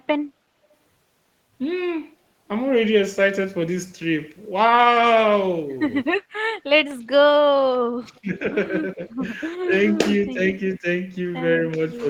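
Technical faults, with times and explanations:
7.75–9.26 s, speech suppressed in double talk: the speech sinks in pieces, about 35 dB at its deepest, roughly 0.7 s in total, likely an echo canceller ducking both sides during overlap rather than a dropout.
8.16–8.20 s, echo leak: a faint copy of the speech returns 370 ms late, about 35 dB down, likely residual loudspeaker echo that the far end's canceller failed to remove. It adds sound instead of removing it.
9.65–10.01 s, 10.34–10.40 s, 10.80–10.86 s, 11.96–12.04 s, speech suppressed in double talk: brief, shallower dips of about 10 dB, the last about 5 dB, likely the same overlap ducking, with no added copy.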